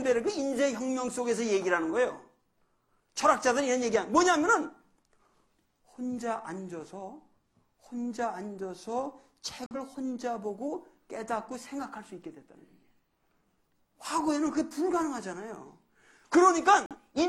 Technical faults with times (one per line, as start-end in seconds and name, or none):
9.66-9.76 corrupt frame muted
16.86-16.96 corrupt frame muted